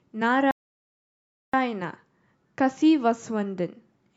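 At 0.51 s the speech cuts out abruptly in mid-flow. Silence follows for about 1.02 s, until 1.53 s, when the audio comes back. This is a playback stall. The gap is dead silence, not a fade or a dropout of a few milliseconds. The likely cause is that the player ran short of data or its playback thread was held up. Output stopped until it recovered and could feed audio again.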